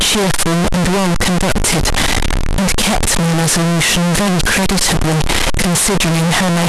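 Float read as integer runs through the whole recording. The speech is extremely loud and harsh, with a waveform close to square at an almost fixed, high level. Background noise sits at the same level as the speech, yet the pitch contour stays traceable. The likely cause is 32-bit float samples decoded as 32-bit integers, so each sample's sign and exponent bits, not its true amplitude, set the output level.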